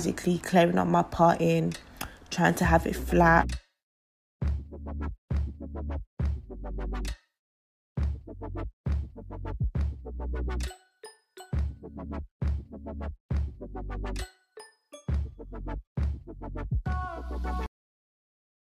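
At 17.66 s the sound stops abruptly mid-event, with no decay, and digital silence fills the remaining second or so. This is a cut-off end: the final buffers of audio were never written or played back, so the recording ends partway through.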